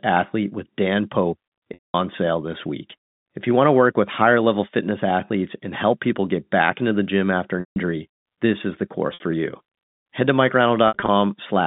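Telephone-band speech over G.711 has packet loss with pitch repetition at 1.74–1.94 s, 7.60–7.76 s, 9.14–9.20 s and 10.88–11.08 s, where the last pitch period is looped to fill dropouts of 200, 160 and 60 ms. The final one scatters 120 ms of gaps over 200 ms, in runs of at most 60 ms, so the gaps are bridged by a held, buzzy tone.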